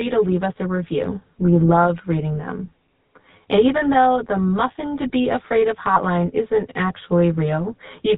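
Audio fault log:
throughout: channel delay (comb filtering). One channel trails the other by around 10 ms, and summing them to mono cancels shared content at evenly spaced frequencies, starting around 40 Hz. The result is a hollow, phasey colour with fixed notches. Unlike codec roughness, the colour is a static tonal hole rather than grit.
throughout: GSM full-rate codec. Plainly audible buzzy, gravelly roughness and nothing above 4 kHz, which fits GSM full rate at 13 kbps. The codec rebuilds the sound from a vocal-tract model excited by sparse regular pulses, so the grain follows the speech rather than sitting as a fixed filter.
5.94 to 5.98 s: lost GSM frames. The sound briefly freezes into a rough, metallic ring, which fits one lost 20 ms frame. The decoder repeated the last good frame's settings instead of dropping to silence, so the gap is heard as a short held buzz rather than a dropout or click.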